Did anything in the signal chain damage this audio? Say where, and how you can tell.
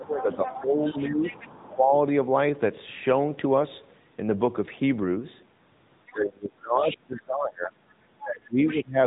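Yes. Throughout, the sound has a fixed colouring, typical of channel delay (comb filtering). It comes from a mono sum where one channel lags by a few samples, about 0.07 ms, which puts the first notch near 7 kHz.

The whole clip is band-limited below 4 kHz, with a buzzy, synthetic edge on the speech. That is the AMR narrowband mobile codec at 10.2 kbps, introduced at the codec stage, and its damage is plainly audible.

From 0.0 to 1.21 s and again from 6.12 to 7.77 s, the speech dips, by about 15 dB and then about 25 dB. This is speech suppressed in double talk, likely the call-processing echo canceller ducking the talker while both sides spoke.

A second, quieter voice breaks through from 0.19 to 1.68 s, at 6.06 to 6.13 s, at 6.88 to 6.95 s, and at 8.68 to 8.8 s. It sits about 15 to 30 dB below the talker. This is the other side's voice leaking through, probably loudspeaker echo the canceller missed.

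Brief 20 ms dips or warbles occur at 5.2 s and 8.38 s. These are lost AMR speech frames: the decoder concealed a single bad frame on the radio link by repeating the previous parameters at reduced gain.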